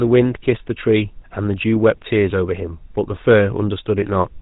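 From start to finish the speech carries the signature of the GSM full-rate codec, a buzzy, gravelly roughness laid over every syllable, with nothing audible above 4 kHz. The damage is plainly audible and fits the codec's 13 kbps rate. The codec rebuilds the voice from a vocal-tract model excited by sparse, regularly spaced pulses, which causes the grain. A simple band-limited telephone line would sound muffled but smooth, without this rasp.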